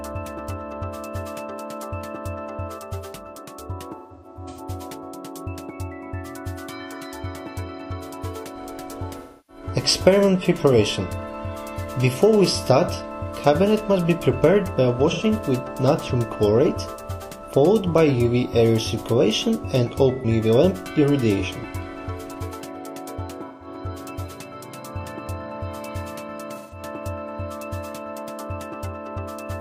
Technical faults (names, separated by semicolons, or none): AAC frame loss with concealment